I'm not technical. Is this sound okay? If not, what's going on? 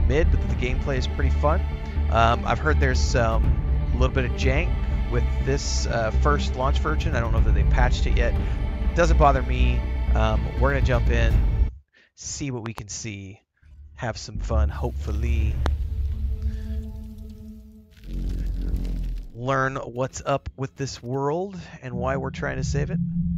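No. There are loud pops: a quick double pop between 12.66 and 12.80 seconds, and a single louder one at 15.66 to 15.68 seconds. Unlike a dropout, the sound keeps playing underneath each thump. This is likely a sudden electrical jolt, such as a plug or switch.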